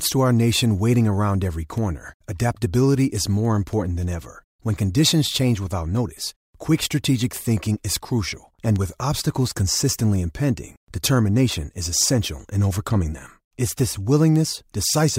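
From 0.10 s to 14.92 s, sharp ticks of uneven strength run steadily under the speech, roughly every third of a second, around fifty in all. These are word clock ticks: the receiving device reads a digital link on its own clock, which drifts against the sender's by something like 70 parts per million. Each time the two clocks slip past each other, one sample is dropped or repeated, and that slip is heard as a tick.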